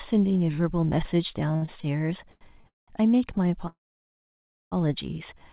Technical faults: repeated stalls (stutter); short stall from a late packet; call audio freeze

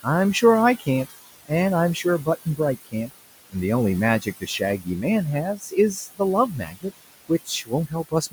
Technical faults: noise suppressor artifacts; speech cut by the noise suppressor

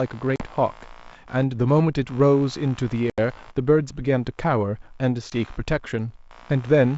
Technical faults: computer activity noise; packet loss on an ADPCM call

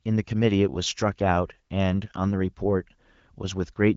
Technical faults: none

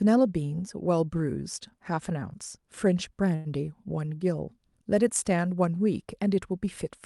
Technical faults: short stall from a late packet

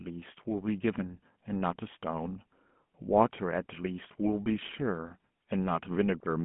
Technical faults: GSM full-rate codec

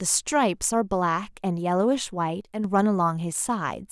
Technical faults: one channel drops out

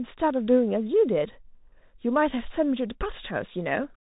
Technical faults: Bluetooth CVSD headset codec

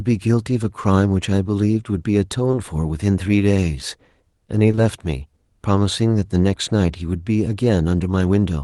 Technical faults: short concealed packet loss

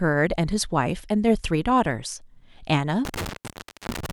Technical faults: intermittent contact

